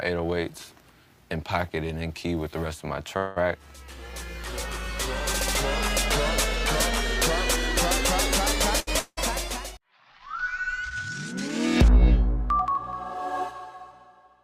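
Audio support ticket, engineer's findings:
Call audio freeze, 3.17 to 3.38 s. Last sound carried on as a fading buzz for about 190 ms, then resumes where it stopped; nothing lost, but playback now runs 187 ms later. Likely packets held in transit, jitter buffer empty.

Short stall from a late packet, 8.80 to 8.89 s. Sound held about 70 ms too long with a slight buzz, then continues from the same point. Jitter buffer ran dry waiting on one late packet; delay grows by 70 ms, nothing missing.

Long network dropout, 8.99 to 9.19 s. Fading buzz concealment for about 180 ms, ending in roughly 30 ms of silence; audio returns further on with about 180 ms never played. Likely a sustained packet loss on the network path.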